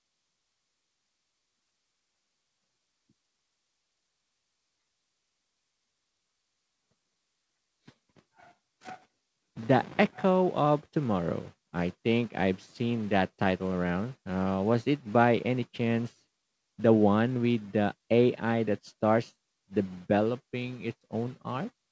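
No technical faults to describe: the speech comes through a wideband call path with nothing above 8 kHz, which fits a G.722 codec at 64 kbps.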